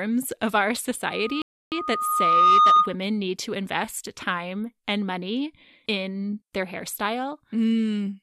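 A speech clip with two overlapping faults. Just after "of our", at 1.05 s, a loudspeaker feedback squeal sets in: a pure tone at 1.2 kHz that swells over roughly a second until it sits around 10 dB above the speech, then stops at 2.96 s before "need to invest time". The microphone is hearing its own loudspeaker, and at that frequency the loop gain has passed one, so the tone feeds itself. On a spectrogram it is a single bright horizontal line at 1.2 kHz, thin at first and thickening as it grows, while the waveform envelope rises steadily. Inside that stretch, from 1.42 to 1.72 s, a rebuffering stall drops everything to silence for 300 ms before the audio resumes exactly where it stopped. The player ran short of downloaded data and waited, so nothing is lost but time is added. The waveform shows a flat gap and the spectrogram a clean vertical blank band that cuts through the feedback line as well.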